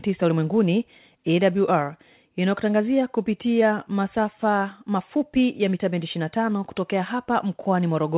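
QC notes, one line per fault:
No faults heard in this speech clip.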